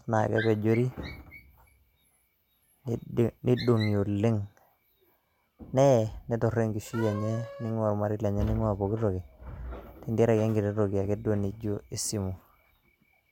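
A speech recording, with no technical fault to be heard in it. Nothing turns up at any point in the audio, so there is no time or cause to give.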